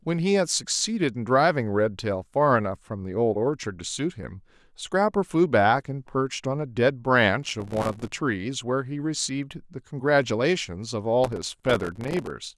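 Processor overload crackle appears from 7.43 to 8.13 s and again from 11.24 to 12.30 s: the processor repeatedly missed its deadlines for very short buffers of a few milliseconds, dozens of times over each stretch, and each miss left a hard-edged gap of silence, heard as gritty crackling over the speech.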